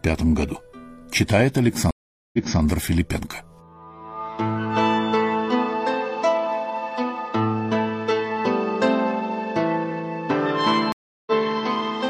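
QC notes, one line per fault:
1.91–2.61 s and 10.92–11.32 s, stream reconnect: the connection dropped and the player fell silent, then restarted a fresh decoder mid-stream. The first gap lasts 424 ms and playback resumes 279 ms earlier, repeating material. The second gap lasts 344 ms and resumes about a tenth of a second later, skipping material.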